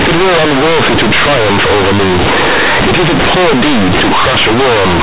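From start to finish this speech has companded audio read as linear: A-law bytes played as raw 8-bit samples, so quiet bits blow up into loud, buzzy distortion with noisy pauses.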